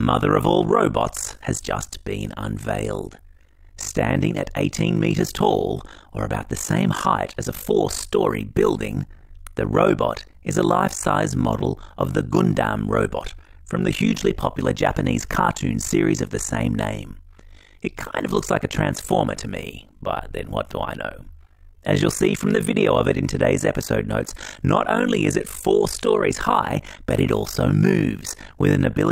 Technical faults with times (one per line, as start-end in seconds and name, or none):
0.00-29.11 overlap-add ripple